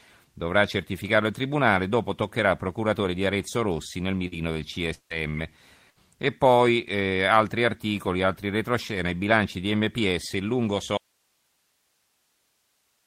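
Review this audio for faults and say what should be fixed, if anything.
Short concealed packet loss at 4.27–4.35 s and 5.30–5.37 s: about 40 ms never arrived, and the decoder extended the preceding sound, leaving a brief smear.

Lost packets rebuilt from error correction at 4.32 s, 5.10 s and 5.34 s: each 20 ms frame came from the next packet's low-bitrate copy, so it sounds rougher and noisier.

Long network dropout at 4.94–5.13 s: the sound continues and fades, goes silent for about 80 ms, then resumes with roughly 160 ms missing. The likely cause is a network stall.

Burst of packet loss at 5.90–6.07 s: about 60 ms went missing in a row. The gap was filled by stretching the last sound as it faded, and speech resumes further on.

Audio dropout to a faint residue from 10.98 s to the end: the speech cuts off abruptly, leaving only hiss about 45 dB below the signal. The likely cause is the source dropping out while the downstream path stayed live.

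To prevent these, stabilise the network link, enlarge the jitter buffer, and secure the source connection so it cannot drop.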